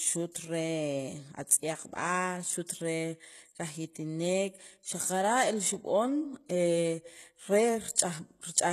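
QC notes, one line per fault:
Throughout, HE-AAC compression likely: the speech has plainly audible codec damage, with nothing above about 12.3 kHz. The treble is rebuilt from copied lower bands, so sibilants come out gritty and lispy, which fits a low bitrate around 16 kbps.
7.96–7.98 s, pre-echo: a short hiss, about 20 ms long, comes just ahead of a sharp attack. The codec spread quantisation noise meant for the loud onset across the whole block, including the quiet moment before it, so the attack sounds smeared.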